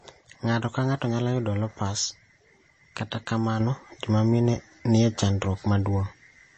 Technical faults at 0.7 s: MP3 compression

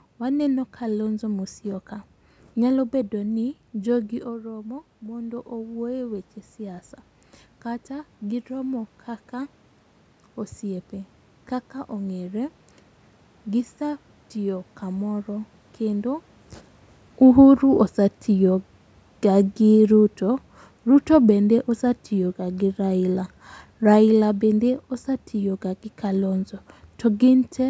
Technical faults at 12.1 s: automatic gain rising

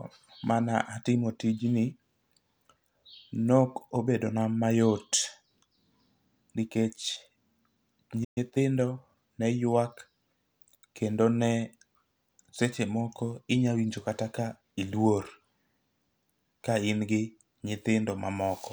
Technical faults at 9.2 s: time-compressed catch-up

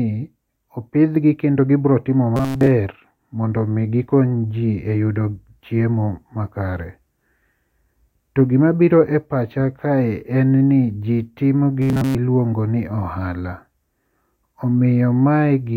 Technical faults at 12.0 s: robotic sound from repeated short buffers

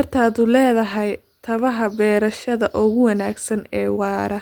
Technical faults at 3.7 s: none

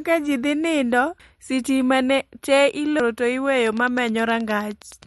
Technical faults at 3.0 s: MP3 compression; audio missing between chunks

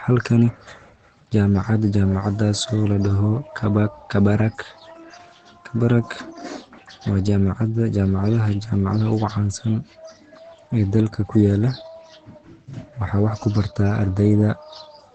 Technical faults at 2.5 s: Opus compression

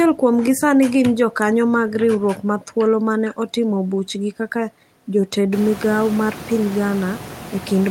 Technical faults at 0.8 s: none

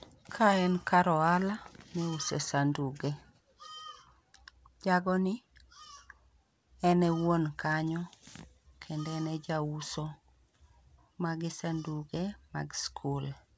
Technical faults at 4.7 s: none

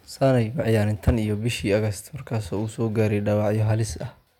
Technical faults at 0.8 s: hard clipping

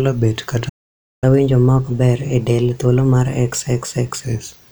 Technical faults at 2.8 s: catch-up at higher speed

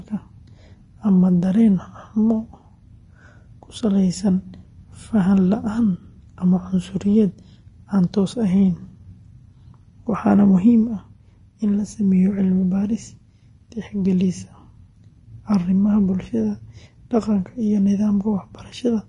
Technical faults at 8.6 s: Vorbis compression

